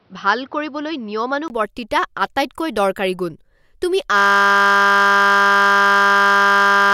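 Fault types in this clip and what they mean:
Input switched to a poorer device: The recording likely began on a weaker input path and then moved to a better one. For the first 1.5 seconds the speech is dull and boxy, with nothing above 6 kHz, and a faint background noise sits roughly 40 dB below the voice. At 1.5 s there is a silence of about 20 ms, and then the full bandwidth returns. The loudness stays about the same across the switch.
System hang loop: From 4.18 s, just after "আটাইতকৈ দৰকাৰী গুণ তুমি", the computer or driver froze while the audio hardware kept replaying its ring buffer. A single 20 ms piece of audio repeats exactly, fifty times a second, and this lasts to the end of the clip. Because the looped piece is so short, the speech gives way to a steady 50 Hz buzz, which fits a small buffer.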